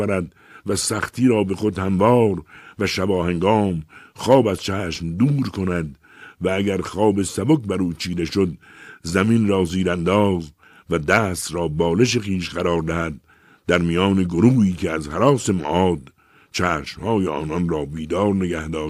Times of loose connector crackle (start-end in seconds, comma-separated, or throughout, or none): none